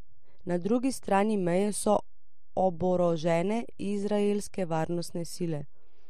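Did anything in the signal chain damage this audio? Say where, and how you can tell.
Yes, a DC offset throughout, from the analogue front end or converter, shifts the whole speech waveform off zero. Unlike hum or rumble, it is steady energy at 0 Hz, not an audible tone.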